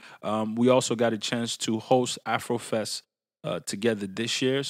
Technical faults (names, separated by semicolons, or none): sample clock jitter